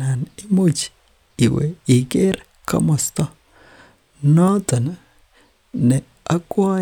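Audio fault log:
Nothing to log here: the speech runs along with no audible faults at any point.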